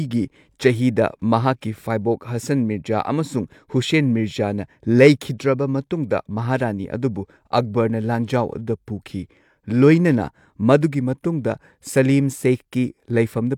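Speech, with no audible faults.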